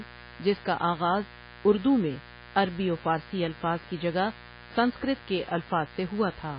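Mains buzz runs through the whole of this speech clip: a steady, raspy 60 Hz buzz sitting roughly 20 dB below the speech. Sharp switching spikes, such as from a dimmer or rectifier, enter twice per cycle, spraying 60 Hz harmonics up into the kilohertz range. MP3 compression damage is also present throughout. Nothing survives above 5 kHz, and the speech sounds watery and swirly, with smeared onsets. That points to a likely MP3 encode at a very low bitrate, near 19 kbps, where the encoder cuts the treble and drops weak frequency lines frame by frame.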